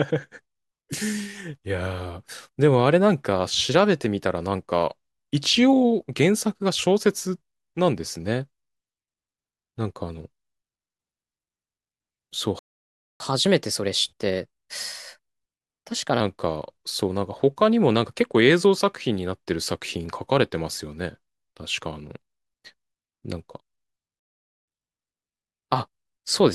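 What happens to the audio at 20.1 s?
Nothing goes wrong at 20.1 s; the speech carries on intact through that moment with no dropout, click or distortion.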